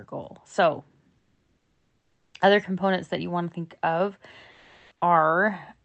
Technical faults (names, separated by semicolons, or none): comfort noise in place of the background